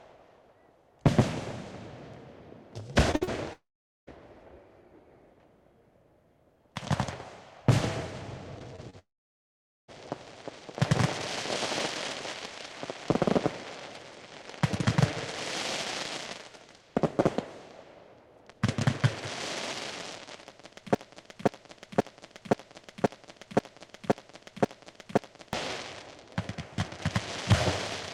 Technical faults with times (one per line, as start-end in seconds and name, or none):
3.11-3.29 short concealed packet loss
3.15-3.23 burst of packet loss
3.53-4.09 long network dropout
8.59-8.95 short concealed packet loss
8.99-9.90 long network dropout
20.95-25.53 broken-record loop